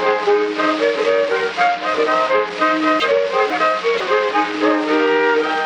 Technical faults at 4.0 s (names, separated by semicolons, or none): chunks out of order; corrupt frame decoded